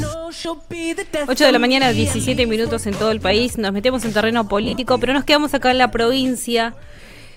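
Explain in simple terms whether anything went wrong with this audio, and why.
Lost LE Audio frames at 0.43–0.45, 2.97–3.01, 4.64–4.76 and 6.97–6.99 s: the decoder filled the gaps by repeating recent sound with scrambled detail, briefly causing a noisy smear.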